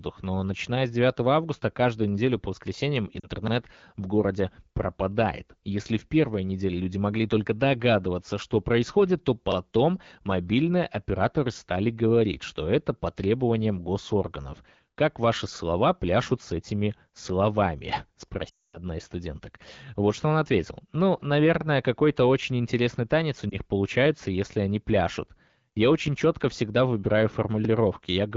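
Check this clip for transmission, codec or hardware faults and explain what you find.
There are three bursts of lost AMR speech frames, all coming across an HD Voice (AMR-WB) call.

Lost AMR speech frames: at 3.20 s, just after "каждую неделю по воскресеньям", there's a short warbly dip lasting about 40 ms. At 23.50 s, between "очень интересный танец у" and "получается если они пляшут", there's a tiny 20 ms blip. The big one runs from 18.49 to 18.78 s, right before "из студенток". There the sound drops to near silence within two frames, which fits a run of lost frames about 240 ms long. In each case, damaged frames failed their check, so the decoder kept reusing the last good pitch and spectral shape at a shrinking gain until real frames returned.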